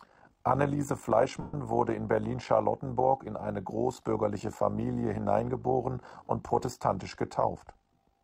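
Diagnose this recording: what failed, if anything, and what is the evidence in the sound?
A frame-based processing stage has an overlap-add ripple running through the whole of the speech. The level pulses by about 11 dB at around 50 Hz, giving a rough, buzzy tremolo that never lets up. The analysis windows are being added back with an overlap whose gains do not sum flat, so every frame boundary dips. A network or buffer fault would come and go at irregular moments. This one is perfectly periodic at the frame rate.

At 1.41 to 1.54 s, just before "wurde in", the Bluetooth link drops about 0.13 s of audio as lost LE Audio frames, which fits roughly seventeen 7.5 ms LC3 frames. Instead of a hard gap or a click, the decoder's concealment repeats the last spectrum with randomised phase. The speech smears into a hissy, pitchless wash that sinks in level toward the end of the loss. Plain silence or a stutter of repeated audio would point to a different concealment scheme. 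The light lossy coding elsewhere in the clip is a separate matter and leaves only faint traces.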